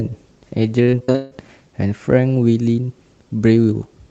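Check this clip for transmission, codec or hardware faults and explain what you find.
One transmission fault stands out. From 0.83 to 1.50 s the speech turns choppy and robotic, with pieces missing. This is repeated packet loss: seven gaps, the longest 151 ms, with nearly half the stretch patched by extending the preceding sound.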